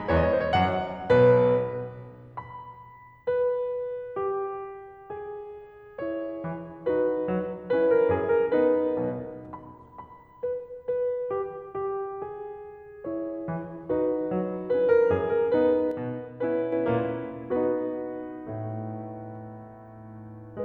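A piece of music carries a sudden gain jump: at 15.91 s the level drops by about 5 dB in a single step, and at 16.72 s it snaps back up, so roughly 0.81 s plays quieter with no fade either way. The likely cause is a digital gain setting applied without a ramp. On a waveform the envelope shows square steps at both edges; on a spectrogram every frequency band dims and recovers together, noise floor included.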